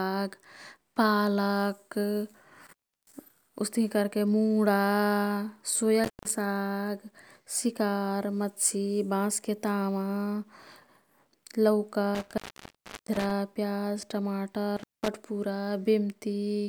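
Intermittent contact interrupts the speech four times: 2.66 to 3.14 s, 6.04 to 6.30 s, 12.15 to 13.31 s, and 14.77 to 15.08 s. Each time, a loose cable or plug briefly opens the signal path, and the line stays open for about 335, 153, 705 and 194 ms respectively. The speech drops out with crackle as the contact breaks and remakes, and faint hiss fills the gap. The third dropout is the longest.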